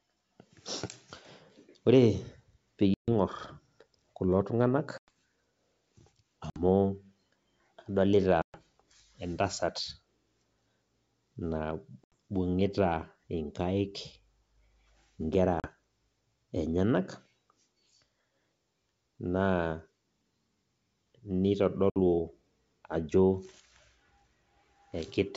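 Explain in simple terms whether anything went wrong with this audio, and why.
Something did go wrong: packet loss on an ADPCM call. The sound drops out abruptly seven times, at 2.94, 4.98, 6.50, 8.42, 12.04, 15.60 and 21.90 seconds. The gaps are short, from 40 to 140 milliseconds, each a handful of lost packets. Each hole is filled with silence. When the sound returns, the receiving decoder has lost track of the sender's running prediction. So it comes back briefly slightly distorted, then settles. The wideband phone coding itself sounds clear.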